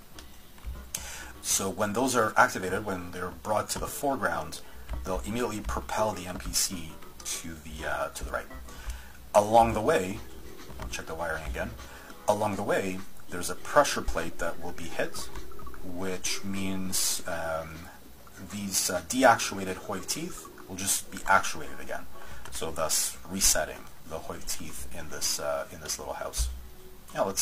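At 2.37, 4.36, 8.34, 10.31 and 14.28 s, overlap between stream segments removes about 26 to 39 ms at 2-second segment boundaries, so the sound jumps in a tiny skip and no silent gap.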